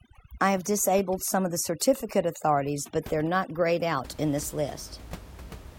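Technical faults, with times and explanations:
0.00 to 4.05 s, overdone noise removal: a noise reduction stage set too aggressively is cutting individual frequency bands down or out wherever they sit close to its noise estimate, and it takes the softer parts of the speech along with the room noise, which otherwise sits about 20 dB below the speech. The background drops and breaks up into twinkling specks.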